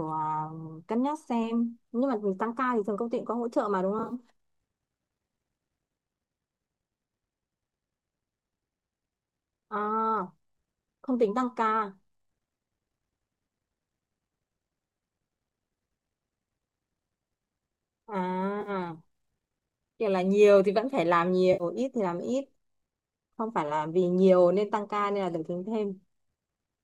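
At 3.99 to 4.14 s, AAC frame loss with concealment causes brief smeared, phasey flickers. About 70 ms is gone in short runs. The decoder patches each gap from the last good spectrum. Similar noisy patches follow at 18.61 to 18.70 s and 21.53 to 21.64 s, likely from a low-delay AAC stream.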